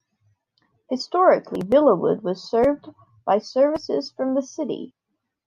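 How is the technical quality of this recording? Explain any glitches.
The recording has no audible glitches, and the speech signal stays continuous and steady throughout.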